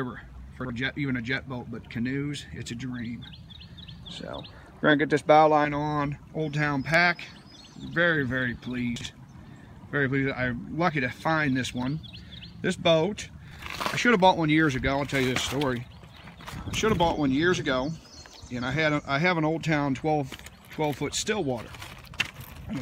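A brief jumbled stutter occurs at 0.60 to 0.70 s, 8.96 to 9.06 s and 13.51 to 13.61 s. These are chunks out of order. In each, one chunk of about 46 ms arrived a chunk late and plays after its successor. Nothing is lost, but the swap leaves hard joins.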